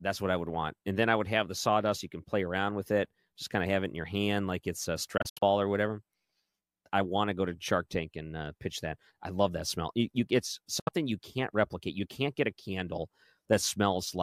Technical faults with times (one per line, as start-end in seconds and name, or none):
5.17-5.43 Bluetooth dropout
10.79-10.89 Bluetooth dropout